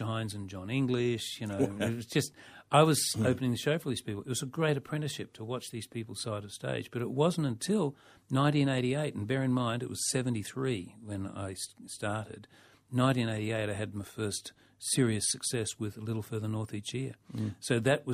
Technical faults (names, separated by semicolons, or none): clock slip clicks